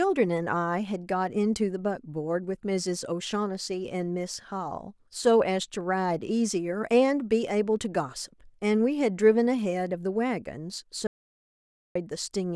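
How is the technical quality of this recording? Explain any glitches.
There's one clear glitch, near the end. From 11.07 to 11.95 s the speech hits an audio dropout to silence, losing about 0.88 s. The input was likely cut, maybe a loose connection or a brief mute, and the recorder kept writing silence. You hear dead silence with no room tone, then the speech comes back mid-flow.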